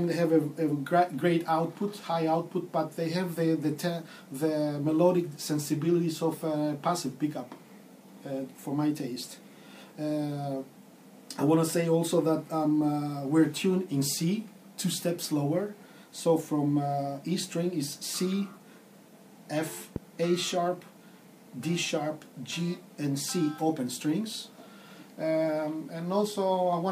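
At 19.96 to 19.98 s there's a single loud pop, roughly 10 dB above the sound, likely a voltage spike from a plug or switch, with the audio carrying on underneath.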